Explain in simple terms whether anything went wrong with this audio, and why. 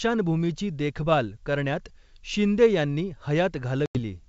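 Packet loss on an ADPCM call, from 3.86 to 3.98 s: about ten packets, some 90 ms of speech, went missing and became silence. The receiver's predictor then fell out of step with the sender's, so speech resumes slightly distorted before settling.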